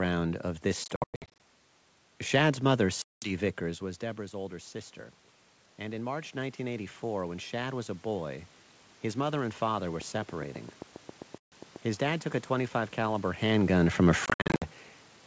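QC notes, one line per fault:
0.84–1.40 s, 3.02–3.32 s, 11.38–11.53 s, 14.26–14.64 s: packet loss on an ADPCM call. Hard-edged silent gaps replace lost packets. The first event loses 340 ms scattered over 560 ms, with a longest run of 100 ms. The others lose 200 ms, 140 ms, and 240 ms. The last is scattered over 360 ms, with a longest run of 60 ms. The decoder's predictor and step size drift from the sender's. After each hole, speech returns slightly distorted.
5.78–8.50 s: automatic gain rising. The input level drops by about 13 dB. The gain control responds by slowly raising its gain by about 5 dB. Voice and room noise swell together over nearly three seconds. The rise is gradual, not a step. The control only partly restores the lost level, so the speech stays quieter than before.
10.01–11.77 s: train of clicks. Similar sharp clicks tick at a regular 7.45 per second, about fifteen in all. 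They peak roughly 5 dB above the signal and sound through pauses as well as speech. Their even spacing and matching shape suggest an outside pulse source. The likely cause is interference from nearby equipment or a faulty connection or power supply. The 11.38 s dropout falls inside this run.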